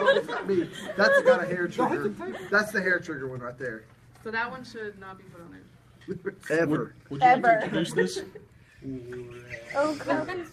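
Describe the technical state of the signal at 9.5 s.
At 9.5 s the signal is intact, with no audible dropout, distortion or other technical fault at that point.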